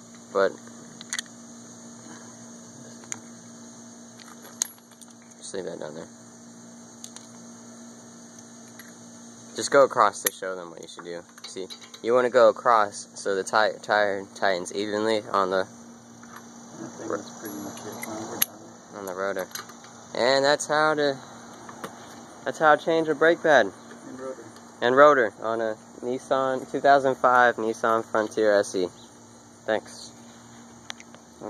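Nothing in the recording stood out as a technical problem on listening.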